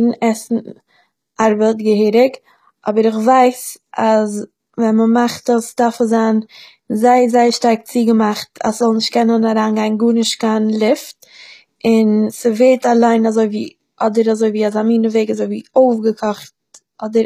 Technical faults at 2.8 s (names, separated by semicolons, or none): HE-AAC compression